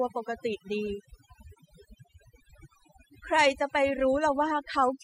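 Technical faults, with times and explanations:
Throughout: overdone noise removal. The noise reduction was set far too strong, so any frequency band that sits near the estimated noise level is pulled down or shut off, taking the quieter parts of the speech with it. The background drops and breaks up into twinkling specks.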